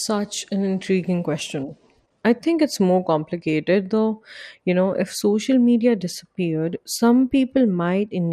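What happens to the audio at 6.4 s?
At 6.4 s the speech carries the same dull, gurgling, granular texture heard throughout the clip, likely from MP2 compression at a rate consistent with about 80 kbps, which starves upper sub-bands of bits. A spectrogram would show high bands flickering on and off and a blocky upper spectrum.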